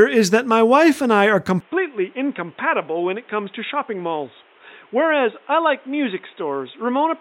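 From 1.60 s, after "wife and I are", the speech turns boxy, slightly quieter and cut above 3.8 kHz. A faint new background noise, which mere filtering wouldn't add, points to an input likely switched to a poorer device.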